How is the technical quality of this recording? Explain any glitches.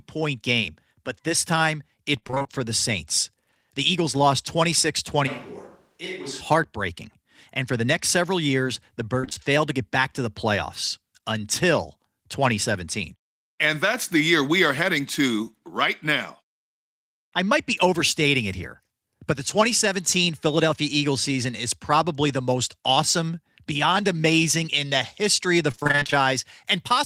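The recording has audible transmission dropouts in three places and one brief stretch where the sound changes character.

Repeated packet loss (robotic sound) occurs from 2.19 to 2.60 s after "game but this time", from 9.21 to 9.38 s between "next several years the" and "failed to get back", and from 25.72 to 26.24 s after "the history of the". Packets kept going missing, and each hole of up to about 27 ms was patched by stretching the preceding sound. Roughly half of each span is that patching, so the speech turns choppy and robotic.

A switch to a distant microphone runs from 5.29 to 6.40 s. The close signal was likely lost, leaving a farther pickup. The speech drops by about 10 dB and turns hollow and roomy, with thinner bass and background noise roughly 35 dB below it. It cuts in and out abruptly.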